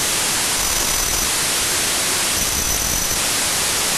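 From start to finish, the sample width is wrong: the pattern fits 32-bit integer samples being read back as packed 24-bit ones. Many three-byte groups straddle the boundaries of the real samples, so many values are assembled from mismatched bytes, and only some carry the true signal's top bits. The speech survives faintly beneath loud, harsh noise, running at 0.75 times its proper speed, so it drags and sits noticeably lower in pitch.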